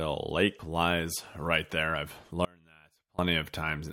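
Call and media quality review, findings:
Audio dropout to a faint residue, 2.45–3.19 s, just after "lies right there I've". Speech cuts abruptly for 0.74 s, leaving faint sound roughly 30 dB down. Likely an upstream signal loss with a live path behind it. Hard edges and a non-silent gap distinguish it from a pause or fade.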